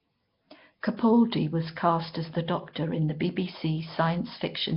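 Speech, heavily damaged throughout by what is likely Nellymoser compression: a fixed two-bit-per-sample block coder, at a low bitrate around 22 kbps, starves weak bands and fills them with noise, leaving a rough hissy halo, smeared underwater tone, and nothing above 5.3 kHz.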